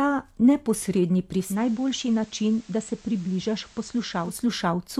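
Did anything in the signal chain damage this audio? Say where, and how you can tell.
Yes, at the receiver: a digital radio blending to analogue. From 1.35 s to 4.48 s the speech cross-fades over about 0.28 s into the FM version. Hiss comes up, and the level drops about 3 dB before it blends back.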